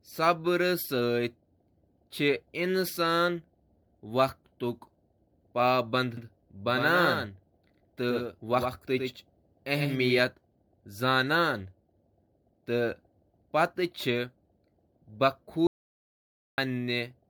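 Generation loss runs through the whole of this speech recording: the sound is swirly, smeared and hollow, with blurred consonant attacks and a ceiling near 20 kHz. The likely cause is repeated lossy coding, around four MP3 passes at a rate that fits 96 kbit/s. Each pass requantises on a shifted frame grid, so its noise and spectral gaps pile up beyond what that bitrate alone would give. A doubled audio track appears from 6.17 s to 10.19 s. A second, full-band copy of the speech trails the original by about a tenth of a second at about 5 dB lower. It has no decay or room colouring, and it switches on and off abruptly at both ends. This likely comes from the same signal being captured again through a slower path and mixed back in. An audio dropout to silence runs from 15.67 s to 16.58 s. The speech cuts off mid-flow and leaves about 0.91 s of silence with no room tone at all, then resumes abruptly. 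Anything spoken in that stretch is lost. This likely happened because the input was interrupted, for instance by a disconnected device or a failed link, while the recorder kept writing silence.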